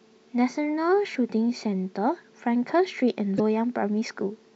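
At 1.11 to 1.16 s and again at 3.36 to 3.40 s, the speech breaks briefly from damaged data in a compressed stream. Corrupted bytes make the decoder misread frames and hunt for sync.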